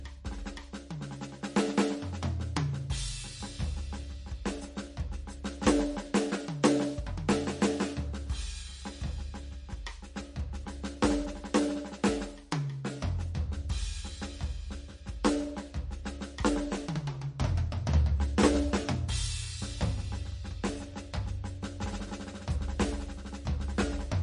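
From start to finish, the music carries plainly audible MP3 compression damage, likely from encoding at a low bitrate near 40 kbps. Nothing remains above 10.6 kHz, so the treble sounds cut off. Starved of bits, faint detail flickers in and out, giving a watery, swirling texture.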